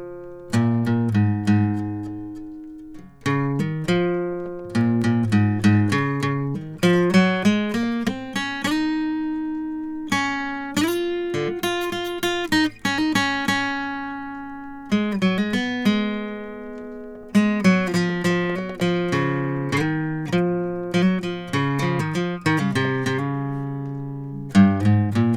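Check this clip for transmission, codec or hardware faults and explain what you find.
One fault turns up in this music: CD scratch ticks between 4.60 and 5.02 s. A scratch on the disc wiped out more data than the player's error correction could reconstruct, and it did so once per rotation. The player covered each gap by interpolating or muting the missing samples. The result is three short clicks, each well under a millisecond, about a fifth of a second apart, a regular pulse that tracks the disc's spin.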